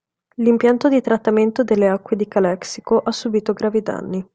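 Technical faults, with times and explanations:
Listening closely to the recording, nothing stood out as a technical problem at any point.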